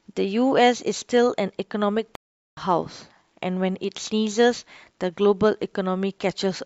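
At 2.15 s the speech cuts to silence and stays silent until 2.57 s, a gap of about 0.42 s. This is a stream reconnect. The connection dropped, and the player restarted a fresh decoder partway through the stream. It differs from a plain dropout because the speech does not pick up where it stopped. It resumes roughly 0.3 s further on, so a short stretch of speech is skipped and the resumption sounds abruptly displaced in time.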